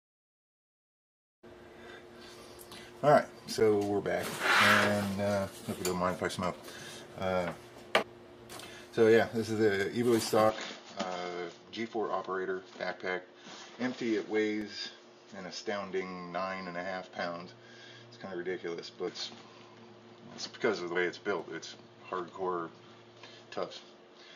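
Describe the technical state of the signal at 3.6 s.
At 3.6 s a block of digital silence cuts into the signal: for about 8.7 ms the sample stream drops to silence, then resumes, with no fade on either side. The waveform drops straight to silence and back, so each edge is a discontinuity. A gap this short is too brief to hear as a hole. It comes through as a tick or dip in the sound.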